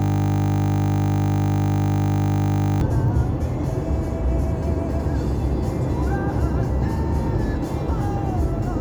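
From the first moment until 2.81 s, the audio is a steady, flat buzz at 50 Hz. This is a system hang loop: the computer or driver froze while the sound hardware replayed one 20 ms piece of its buffer about 140 times.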